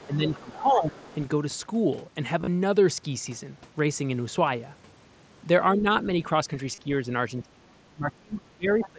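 From 0.00 to 0.17 s a faint second voice sits under the speech, about 25 dB down. This is the other side's voice leaking through. The far end is likely playing on the talker's loudspeaker and reaching the microphone, and the echo canceller has not fully removed it. From 0.07 to 1.04 s the speech sinks in pieces, by roughly 15 dB at the deepest, for about 0.7 s in total. This is speech suppressed in double talk. The canceller likely heard both sides at once, could not tell them apart, and turned everything down. At 1.03 to 1.16 s the faint leaked voice returns briefly.

At 2.40 to 2.47 s there is concealed Bluetooth headset packet loss. About 60 ms of audio went missing between headset and phone, scattered over 75 ms. The longest gap is about 30 ms. The receiver filled each gap by continuing with the best-matching stretch of the last 20 ms or so of waveform. The result is a brief buzzy, held texture with a small warble as the real sound resumes.

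At 5.76 to 5.86 s the speech dips again, by about 10 dB, for around 100 ms. This is another short stretch of double-talk suppression, likely caused by the far end talking over the speaker.

At 6.75 to 6.78 s a 30 ms headset packet loss of four frames is patched over.

From 7.43 s to the end of the clip, the speech is heavily held down. The drop reaches about 30 dB and covers roughly 1.5 s. This is the deepest double-talk suppression in the clip, and it likely comes from both sides speaking at once. Through all of it the audio stays within the 8 kHz band of the mSBC headset codec. Inside this stretch, from 8.80 to 8.87 s, the other side's voice leaks through again. This time it is louder, only about 15 dB below the speech.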